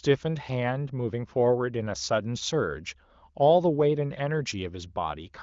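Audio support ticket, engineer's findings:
Nothing stood out on listening; the speech, carried over the AMR wideband (HD Voice) codec at 23.05 kbit/s, gave no symptom worth logging.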